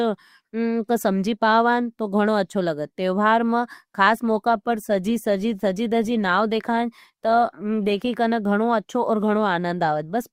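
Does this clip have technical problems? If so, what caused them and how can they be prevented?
Yes. From 4.10 to 8.10 s, after "अच्छो लगत तेवहार म", the speech turns suddenly grainier with more codec artefacts, recovering by "कना गणो अच्छो और". This is an adaptive stream at a lower bitrate: a slowed connection fits a switch from Opus at 64 to 32 kbit/s. A steadier connection or a fixed higher bitrate prevents it.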